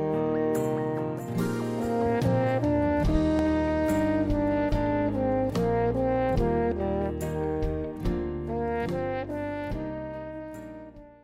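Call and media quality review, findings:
Loud pop, 3.15–3.42 s: two sharp pops in quick succession, peaking around 10 dB over the program, which continues underneath. Likely a voltage step or spike from a connector, switch, static discharge or driver glitch, shaped by downstream circuitry into a brief thump.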